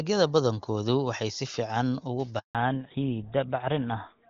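A speech clip carried over AMR wideband (HD Voice) at 23.85 kbit/s, which sounds clear until a handover gap at 2.39 to 2.55 s, just after "waxay si fiican uga". The call moved between networks and no speech frames arrived for 160 ms, so the sound fades within a few tens of milliseconds and stays silent. On a waveform this is a flat line; on a spectrogram, a blank vertical band. From 2.55 s to the end there is a fallback to narrowband. Everything above 4 kHz disappears, and the speech turns duller and rougher, which fits GSM full rate at 13 kbit/s. A spectrogram shows the energy above 4 kHz cut off sharply along a horizontal edge.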